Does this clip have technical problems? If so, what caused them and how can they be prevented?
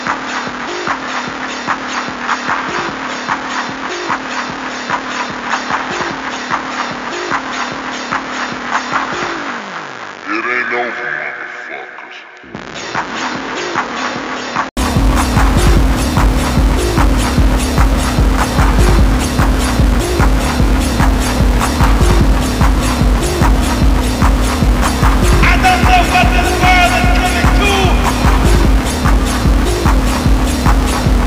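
Yes. From the start to about 14.77 s the audio is dull and boxy, with nothing above about 7.1 kHz, sitting roughly 5 dB quieter, with a faint noise floor around 45 dB down. Then an 80 ms gap, and it opens up to full brightness. That's most likely an input switched to a poorer device, where the system grabbed a narrower-band mic or headset profile first and then handed over to the proper one. Lock the input to the intended microphone before recording starts.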